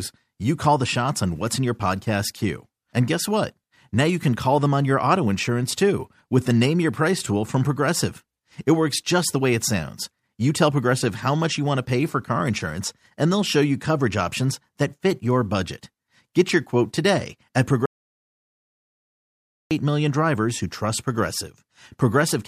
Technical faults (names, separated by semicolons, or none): audio dropout to silence